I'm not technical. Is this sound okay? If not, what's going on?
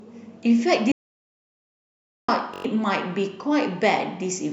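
No. At 0.92 s the speech stops dead and nothing at all is heard, not even the faint background hiss, until it resumes at 2.28 s. This is an audio dropout to silence. About 1.4 seconds of speech is simply missing. The likely cause is that the input was briefly lost, through a loose connection, a failed link or an accidental mute, while the recording carried on writing pure silence.

A moment later, from 2.54 s to 2.65 s, there is a short rattling buzz instead of speech. This is a system hang loop. The computer briefly froze, and the sound hardware kept replaying the same tiny 21-millisecond scrap of audio five times, at about 47 repeats per second, which fits a 1024-sample buffer. Roughly a tenth of a second of real speech is lost there.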